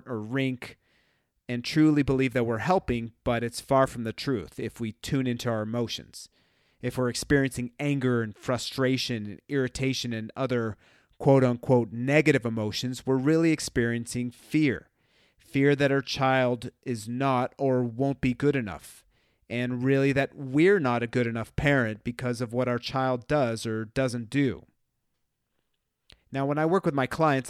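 No technical faults are audible.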